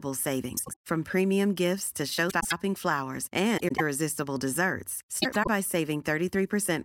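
Speech clip with frames out of order: at four points, neighbouring runs of coded frames were delivered and decoded in swapped order, so each stretch plays with its two halves exchanged. This happens at 0.57–0.75 s, just before "from premium gifts to", then at 2.29–2.53 s right after "from premium gifts to", at 3.58–3.81 s, and at 5.22–5.48 s. Each sounds like a brief garbled flutter. The swapped blocks are about 78 ms and then 105 ms long, which suggests runs of three and then four frames. No time is lost.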